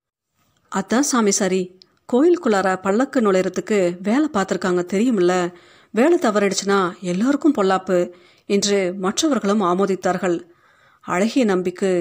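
Nothing in this recording trips any alarm, with no glitches, dropouts or other technical faults turning up anywhere along the way.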